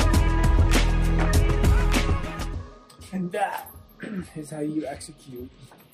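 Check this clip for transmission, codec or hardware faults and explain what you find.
No transmission, codec or hardware faults are audible here.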